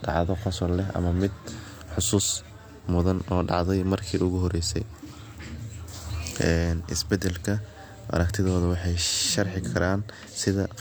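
Nothing in the speech stood out as a technical fault on listening.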